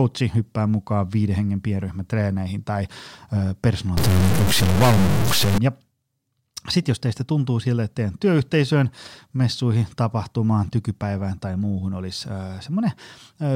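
Stuck bit from 3.97 to 5.58 s: harsh, buzzy distortion with noise in the pauses, likely one data bit held fixed, shifting values by a step of about -15 dBFS.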